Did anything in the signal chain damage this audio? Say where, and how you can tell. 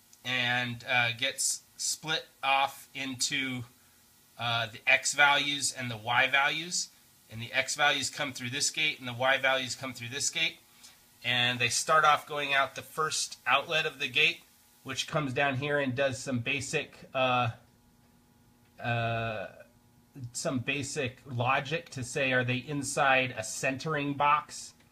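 Yes: pre-emphasis left on from 0.0 to 15.09 s, in the transmission stage where the receiving end's de-emphasis was skipped. The treble rise follows a J.17-style curve, about 11 dB higher at 10 kHz than at 1 kHz, so the sound is thin, glassy and hissy.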